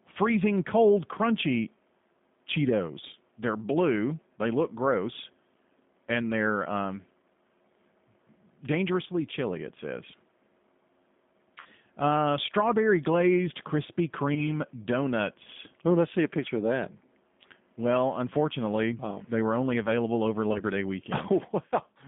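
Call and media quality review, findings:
G.729 codec, whole call: plainly audible rough, slightly synthetic timbre, band limited to about 150 Hz to 3.6 kHz. Fits 8 kbit/s G.729A rebuilding speech from filter, pitch predictor and sparse pulses. Unlike plain low-pass filtering, the harshness comes from the coarse excitation.

VoIP packet loss concealed by the speech codec at 11.60 to 11.66 s, 14.34 to 14.60 s and 20.53 to 20.62 s: speech smeared into fading buzz. Decoder extends its last pitch and filter. Unlike dropouts, there is no silence, and the distortion outlasts each gap. The first gap is about 40 ms, which fits two lost 20 ms packets. The others are about 20 ms each.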